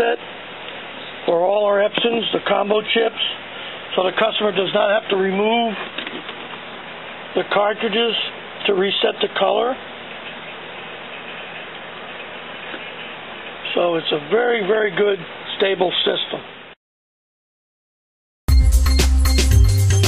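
Hard clipping at 1.98 s: a brief peak reaches the ceiling of a converter or number format and is cut flat for an instant. The overload is marginal, so the squared-off top adds only a short burst of high harmonics, heard as a single tick.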